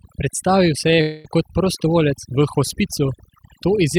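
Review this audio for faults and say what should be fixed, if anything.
Overdone noise removal runs through the whole recording: a noise reduction stage was pushed too hard, cutting individual frequency bands down to almost nothing whenever they came near its noise estimate, and taking the quieter parts of the speech with them. Between phrases the background falls to near silence scattered with twinkling specks. Prevent it by easing the reduction strength and keeping a floor of residual noise.

A short stall from a late packet occurs between 0.95 and 0.99 s. One packet missed its playout time and the jitter buffer emptied, so the receiver stretched the last sound for about 18 ms until the packet turned up, then carried on from the same point. Nothing is lost, but that instant of speech is held slightly too long, leaving a slight buzz or dip in the flow. A larger or adaptive jitter buffer would absorb a delay this small.

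A call audio freeze follows from 1.01 to 1.27 s. The most likely cause is packets held up in transit, draining the jitter buffer for about 233 ms while the receiver kept extending the last sound instead of going silent. What you hear is the speech stopping and a fading buzz or hiss hanging in its place, then the audio resuming exactly where it left off, so a quarter-second gap has been inserted with nothing missing. Give the network path priority or enough buffer depth to ride out bursts like this.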